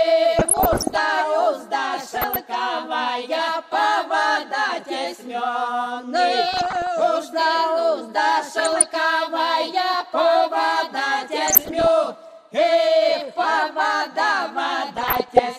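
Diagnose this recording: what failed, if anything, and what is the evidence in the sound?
DAB burbling, a codec-stage failure on the radio link. Burbling bursts sit at 0.39–0.99, 2.08–2.36, 6.49–6.87, 8.56–8.86, 11.45–11.89 and 14.96–15.39 s. Weak reception let bit errors, under one percent, past error correction. Corrupted MP2 data put short blips of noise in single sub-bands.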